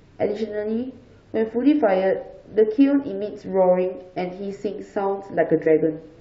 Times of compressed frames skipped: 5.65

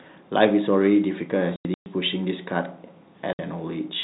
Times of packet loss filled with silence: 1.56-1.86, 3.33-3.39

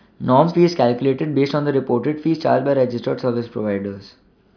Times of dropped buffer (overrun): none

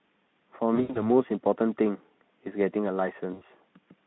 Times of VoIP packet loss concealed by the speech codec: 0.75-1.03, 3.33-3.43

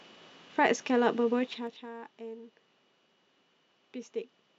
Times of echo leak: none

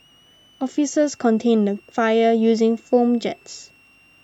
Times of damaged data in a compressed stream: none

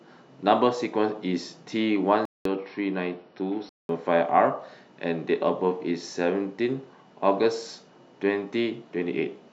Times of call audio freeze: none

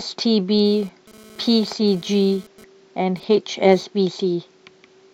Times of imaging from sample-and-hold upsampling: none

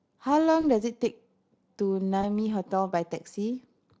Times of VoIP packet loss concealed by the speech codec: 0.61-0.67, 2.21-2.26

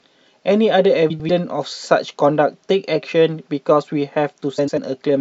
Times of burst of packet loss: none

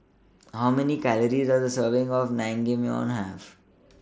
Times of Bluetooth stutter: none

